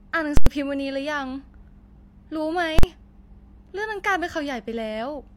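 A very loud pop at 0.37 s and another at 0.46 s frame a stretch of silence where the speech should be. Around 2.79 to 2.83 s the same thing happens in a shorter span, heard as one harsh bang. Both are invalid numbers at full scale: a calculation went infinite or undefined, so each block was pinned to maximum amplitude. The first lasts about 93 ms, which fits a 4096-sample block, and the second about 46 ms, fitting 2048 samples.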